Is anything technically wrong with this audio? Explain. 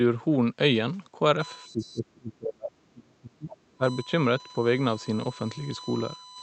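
Yes, there are two faults.

USB whine, from 1.40 s to the end: the USB bus's 1 ms frame current leaks through power or ground, giving a steady 1 kHz whine, strongest at its 4 kHz harmonic, around 20 dB below the signal.

Speech suppressed in double talk, from 1.68 to 3.83 s: the speech dips by as much as around 30 dB for roughly two seconds in total. The likely cause is an echo canceller that could not separate the talker from loudspeaker echo, so it turned both down.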